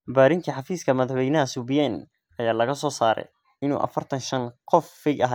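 A speech recording with nothing technically wrong with it.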